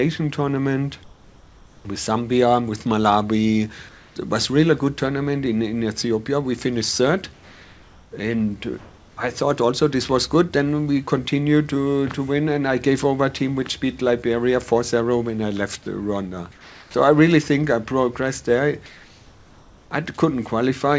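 Comfort noise in place of the background appears at 1.04–1.85 s, 3.89–4.16 s, 7.34–8.12 s, 8.78–9.17 s, 16.52–16.94 s and 18.86–19.91 s. In each gap, the quiet background, about 25 to 30 dB below the loud passages, gives way to a smooth, featureless hiss, about 1 to 5 dB quieter, until the sound resumes. The likely cause is discontinuous transmission: the sender paused, and the receiver synthesised roughly matched noise. Throughout, nothing is heard above 8 kHz, which fits a G.722 call path.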